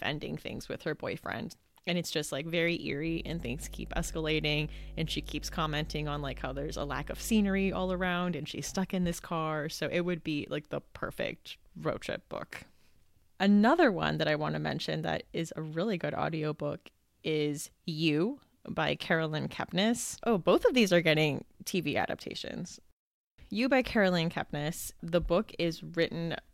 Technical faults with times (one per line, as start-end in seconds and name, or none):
3.07-8.07 mains hum